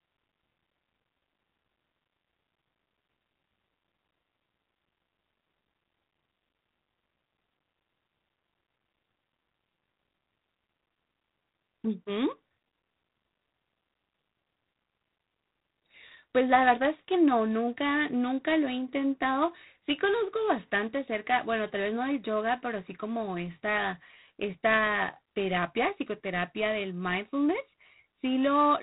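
G.726 ADPCM coding runs throughout: a harsh, rasping hiss rides on the speech and follows its level, consistent with 24 kbit/s, and nothing above 4 kHz survives.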